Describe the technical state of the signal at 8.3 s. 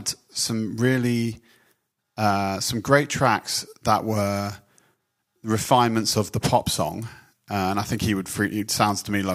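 At 8.3 s the audio is intact, with no dropout, clipping, glitch or other fault audible at that moment.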